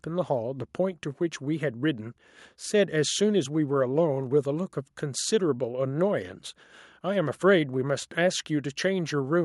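Across the whole recording the speech signal shows no technical faults that a listener can hear.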